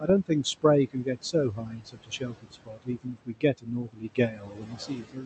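Noise suppressor artifacts run through the whole clip. The suppressor treats the room noise, which sits about 12 dB below the speech, as steady noise and pulls those bands down by about 20 dB frame by frame. The noise floor therefore drops in the gaps and swells back under the talking. On a spectrogram the background looks patchy and speckled instead of an even wash. It thins in the pauses and thickens behind each syllable.

Speech cut by the noise suppressor occurs first at the very start, from 0.0 to 0.09 s, roughly a tenth of a second. The suppressor mistook the opening sound for noise and lowered it by up to about 11 dB, so the onset comes across faint and swallowed. In the waveform the first few cycles look shrunken compared with what follows. On a spectrogram the quieter high-frequency detail of that onset is missing or ghostly.

The same fault returns from 0.93 s and lasts to the end of the clip. 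The drops here go deeper, up to about 22 dB. Soft consonants, word tails and quieter stretches are dragged down along with the background, so they sound clipped short or muffled. In the waveform the envelope falls away abruptly at word edges instead of tapering. On a spectrogram the fricative energy and decaying harmonics break off in blotchy gaps. Above all of this, content stops near 8 kHz, which fits an Opus call path running at a moderate bitrate.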